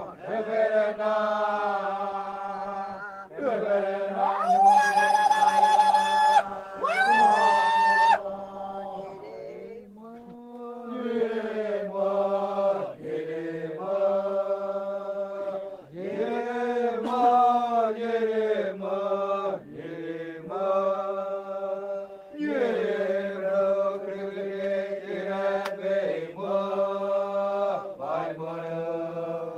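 No technical faults can be heard anywhere in the recording of sounds, with the signal holding steady and intact throughout.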